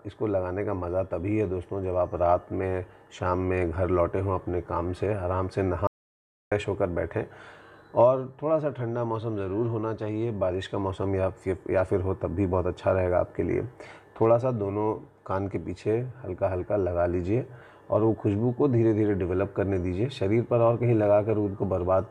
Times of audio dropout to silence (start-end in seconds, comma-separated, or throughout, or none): 5.87-6.52